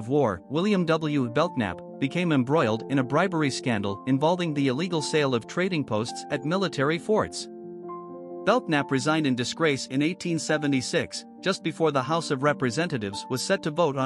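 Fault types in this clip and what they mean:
No technical faults can be heard in this clip. Nothing in the audio points to a problem anywhere in the signal chain.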